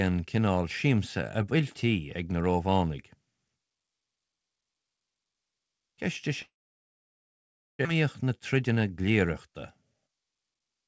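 A speech recording carried over a call path whose band stops at 8 kHz, which fits a wideband codec such as G.722. At 6.42 s the sound smears into a brief fading buzz and then drops to near-silence until 7.87 s, resuming without roughly a second of what should have been there. This is most likely a long network dropout: packets stopped arriving, the receiver briefly extended the last sound, then went quiet, and the speech picked up further along with that stretch missing. Right after, from 7.94 to 9.49 s and again from 9.93 to 10.83 s, the speech sounds hurried without any change in pitch, running about 9% and then 11% faster. This is a jitter buffer speed-up. Audio delayed by the gap piled up in the buffer, so the receiver cut many short pitch-period slices to catch up, removing roughly 150 ms and then 100 ms.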